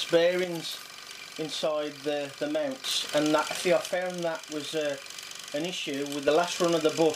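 A stereo channel likely went silent twice, from 0.44 to 2.84 s and again from 3.88 to 6.28 s, a one channel drops out fault on each occasion. With only one side feeding the mono sum, everything common to both channels falls abruptly by about 6 dB for those 2.4-second stretches, and anything carried only on the missing side vanishes. Both drops and both recoveries are sudden steps in level rather than gradual fades.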